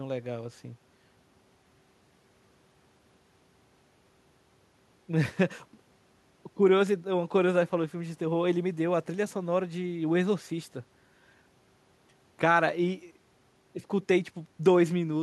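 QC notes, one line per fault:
Nothing to flag on this speech clip, so no QC lines are needed.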